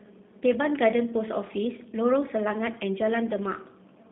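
From start to end the speech carries G.729 codec damage, plainly audible: band-limited to 150 Hz–3.7 kHz, nothing above 3.8 kHz, rough and synthetic, consistent with 8 kbit/s G.729A.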